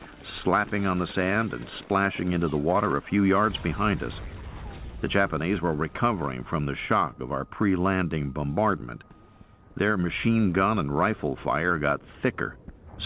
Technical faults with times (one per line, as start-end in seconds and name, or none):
none